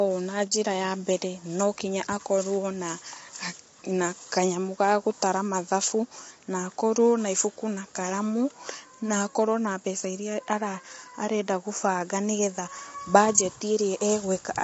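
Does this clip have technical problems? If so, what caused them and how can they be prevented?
Yes. The speech was likely squeezed through low-delay AAC compression (AAC-ELD) at a low rate, around 24 kbps going by the damage. Its short frames capture the fine harmonic structure of speech poorly and spend bits inefficiently, so the encoder fills gaps between harmonics with noise and discards the top band. Throughout the clip the speech sounds rough and grainy, with nothing above 7.7 kHz. To prevent it, raise the bitrate or allow a higher-delay codec mode.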